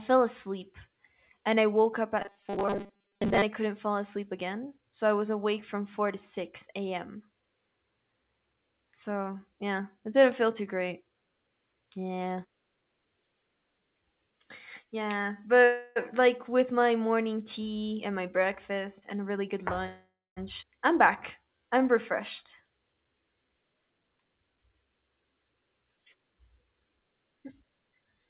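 Speech carried over a call path whose audio stops at 4 kHz, consistent with G.711 A-law at 64 kbps, shows several jitter and buffering faults. From 2.22 to 3.42 s there is robotic sound from repeated short buffers, likely caused by audio arriving too seldom. Most of that stretch is replayed fragments that lock a rigid 200 Hz buzz onto the sound, which fits 5 ms repeats; the real audio underneath is skipped, unlike a freeze. Call audio freezes occur at 15.64 to 15.98 s and 19.86 to 20.38 s. In the first, the last sound is stretched for 318 ms with no silence. In the second, 504 ms is filled and about 220 ms of it decays to silence. In both, playback resumes where it stopped, with nothing missing. A jitter buffer speed-up runs from 17.66 to 19.86 s: the audio plays at 110% with pitch unchanged, as about a fifth of a second of pitch periods is trimmed. At 20.60 to 20.64 s the audio skips ahead, and roughly 0.4 s is dropped. 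Unlike the freezes, the jump is bridged by only an 18 ms fill, so the sound on either side is almost directly joined. From 21.39 to 21.91 s a jitter buffer slow-down adds 100 ms of repeated periods, so the audio plays at 83% speed with drawn-out sounds and the same pitch.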